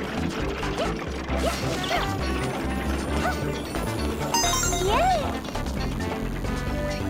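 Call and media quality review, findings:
DECT cordless phone buzz from 3.75 s to end. Thin 100 Hz buzz, rich harmonics, roughly 25 dB below signal. Nearby DECT base or handset bursting every 10 ms, rectified in the audio circuit.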